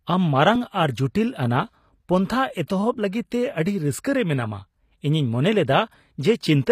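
A speech clip whose codec damage is plainly audible from start to finish, with the treble sounding synthetic rather than natural; the likely cause is HE-AAC compression at a low bitrate, consistent with about 24 kbps. Only the lower spectrum is truly coded, and the upper band is rebuilt by copying lower bands upward, so harmonics fail to line up across the crossover. A spectrogram would show that treble as repeated, blocky patterning, with nothing above 15.4 kHz.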